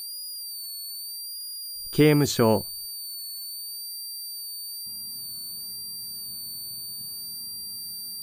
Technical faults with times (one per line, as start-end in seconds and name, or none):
0.00-8.22 switching supply whistle